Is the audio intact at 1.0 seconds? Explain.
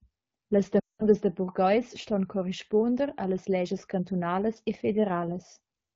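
No, that's inside a run of lost AMR speech frames from 0.79 to 1.04 s. Concealment stretches the last good frame with falling gain, so by 1.0 s it's faded to near silence.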